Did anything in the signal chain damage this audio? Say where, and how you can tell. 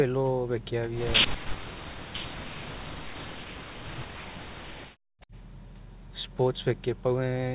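Yes. From 1.25 to 5.33 s the speech sinks, dipping by up to about 40 dB. This is likely speech suppressed in double talk by the echo canceller.

From 5.21 to 5.26 s a faint copy of the sound returns 253 ms late, about 35 dB down. This is likely an echo leak that slipped past cancellation.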